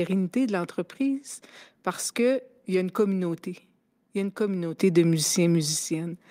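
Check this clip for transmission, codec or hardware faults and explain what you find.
Two level faults affect the speech. At 4.78 s a sudden gain jump, likely a digital gain setting applied without any ramp, lifts speech and background together by about 10 dB through to the end. At 5.79 s the microphone volume is stepped down, likely by the call software reacting to a too-loud input, dropping everything abruptly by about 5 dB.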